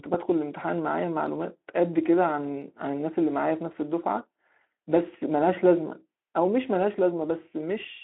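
Nothing stood out on listening to this speech recording.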